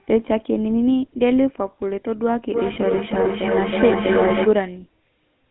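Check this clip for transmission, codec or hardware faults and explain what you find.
Two faults are present: GSM full-rate coding across the whole speech clip and one short frame dropout near the middle.

GSM full-rate codec, throughout: the vocal-tract model with regular-pulse excitation gives plainly audible buzzy, gravelly roughness, consistent with 13 kbps full rate, confined to a 200 Hz to 3.5 kHz band.

Lost GSM frames, 2.74 to 2.78 s: the decoder held the previous frame's parameters, producing a brief rough, metallic ring that fits a single missing 20 ms frame.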